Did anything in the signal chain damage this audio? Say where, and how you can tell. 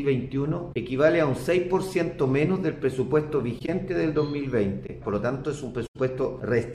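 Yes, at the codec stage: corrupt frame concealed, at 0.73–0.76 s, 3.58–3.69 s, 4.86–4.90 s and 5.86–5.96 s. Each spans what sounds like one to four AAC frames. The decoder caught the damaged bits and muted or patched over them, so timing holds.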